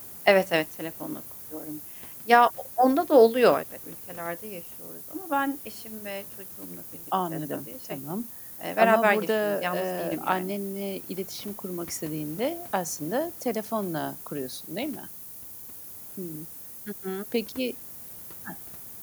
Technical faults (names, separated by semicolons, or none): low bit depth with noise shaping